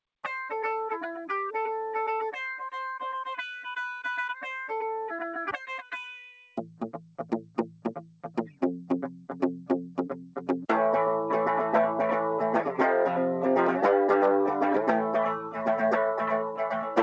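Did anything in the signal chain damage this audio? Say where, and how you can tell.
Yes. The call processing stage damaged it: the noise suppressor cut sound twice, from 5.62 to 5.94 s and from 6.33 to 6.58 s, pulling level down by about 11 dB and about 10 dB. The suppressor misjudged this material as noise and attenuated it harder than its surroundings. What separates this from a dropout or packet loss is that the sound sinks rather than vanishing. The dip follows the suppressor's gain, not a gap in the stream. The band ending near 8 kHz fits the G.722 wideband call path and is not part of this fault.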